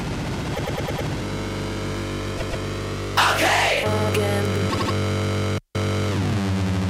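The audio stutters from repeated frames at 0.54–1.06 s (a 104.5 ms block replayed five extra times), 2.37–2.63 s (130.6 ms, twice more) and 4.69–4.93 s (78.4 ms, three more). Unlike a dropout, nothing goes missing: identical short blocks recur, lengthening the audio.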